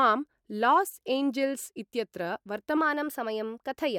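From 2.77 s to the end of the speech, the audio shows a wrong sample rate fault. The samples appear to be played faster than they were captured, with no conversion. The change fits 44.1 kHz material played at 48 kHz. Speed rises by a factor of 1.09. Pitch rises by about 1.5 semitones. The voice turns slightly high and hurried. Timing and pitch shift together, as one change.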